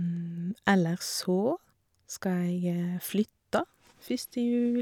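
Nothing in this speech recording stood out as a technical problem on listening.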